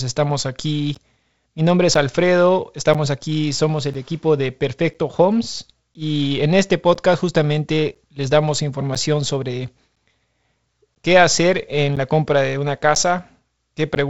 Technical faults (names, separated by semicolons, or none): periodic USB or driver dropouts